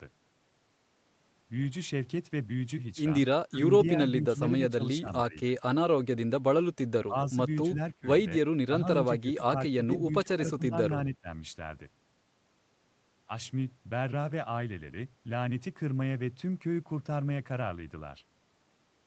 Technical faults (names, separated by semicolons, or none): speech suppressed in double talk